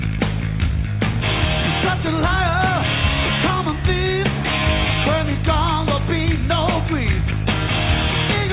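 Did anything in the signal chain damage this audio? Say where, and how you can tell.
No, nothing in the signal chain damaged this audio.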